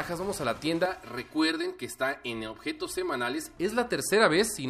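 From 0.86 s to 3.57 s the audio turns hollow and phasey, the signature of channel delay (comb filtering). One channel arrives roughly 3 ms late, and when the two are summed to mono, shared content cancels at regularly spaced frequencies, the first notch near 150 Hz and the rest repeating every few hundred hertz. A spectrogram shows evenly spaced dark horizontal bands that hold still across that stretch and vanish outside it.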